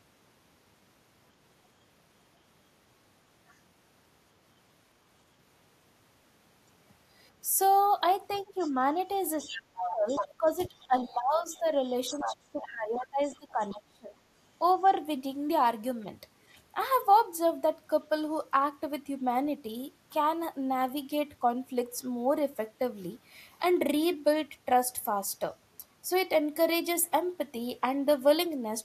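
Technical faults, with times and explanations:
8.33 to 13.75 s, other side's voice leaking through: a second voice surfaces under the talker at 8.33 to 8.71 s, 9.4 to 10.26 s, 10.78 to 11.04 s, 11.54 to 11.59 s and 12.11 to 13.75 s. It is faint, about 25 to 30 dB down, in the short scraps, but close to the talker's level, about 5 to 10 dB below, in the longer stretches. The likely cause is the far end playing from a loudspeaker into the microphone, with the echo canceller failing to cancel it fully.
8.44 to 8.94 s and 9.4 to 14.21 s, speech suppressed in double talk: the talker's level sinks while the far-end voice is present. The first dip is brief, about 10 dB and roughly a third of a second. The second runs on and off for about four seconds and reaches roughly 25 dB down. The likely cause is both sides talking at once, so the canceller could not tell its own talker from the echo and attenuated everything together.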